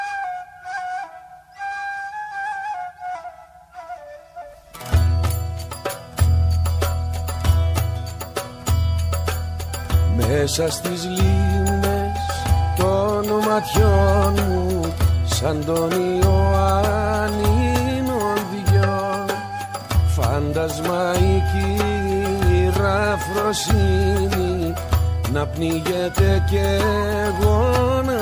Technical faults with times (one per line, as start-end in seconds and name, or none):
none